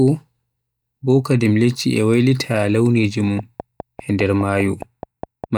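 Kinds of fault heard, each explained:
Train of clicks: a steady ticking sits over the speech from about 3.39 to 5.45 s, roughly ten clicks at close to 4.9 per second, evenly spaced and alike in shape. They peak around 5 dB above the speech. Electrical interference or a faulty connection is the likely cause.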